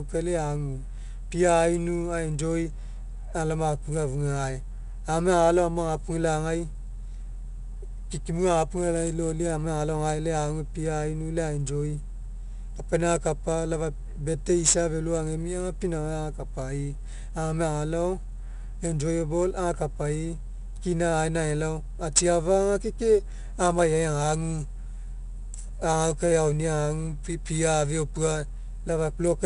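Speech, with 4-bit ADPCM compression audible throughout: a gritty hiss rides on every loud syllable and roughens sharp onsets. Because that noise tracks the level instead of warbling like perceptual-codec artefacts, it is ADPCM. Nothing above 10.6 kHz, which fits a rate near 89 kbps.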